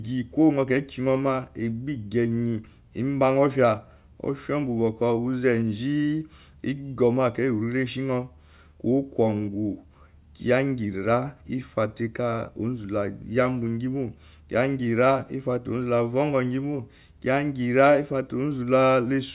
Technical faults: none

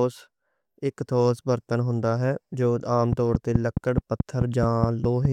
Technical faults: train of clicks

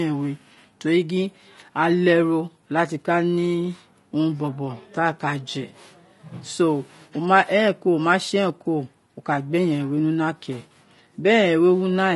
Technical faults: low-delay AAC compression

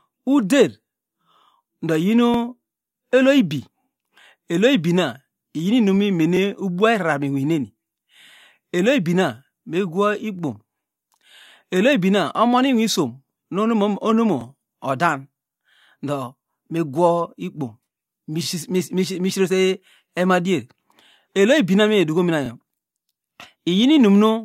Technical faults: overlapping chunks

